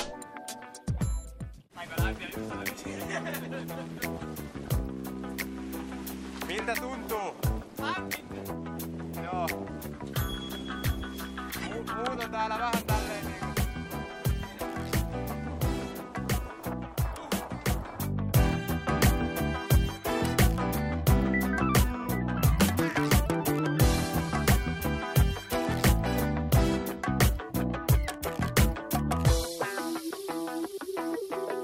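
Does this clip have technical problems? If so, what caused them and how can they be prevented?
Yes. Integer overflow cracks hit at 18.34, 21.79, 22.61, 24.49 and 28.58 s, with a slightly longer burst from 25.85 to 25.88 s. Each is a sharp, violent snap on a loud peak. The signal reached the top of the integer range and wrapped around to the opposite extreme. The overdrive is only about 0 dB, so the peaks barely go past the limit, yet each one flips completely. This is far harsher than clipping. Saturating arithmetic, or limiting before conversion to integers, prevents it.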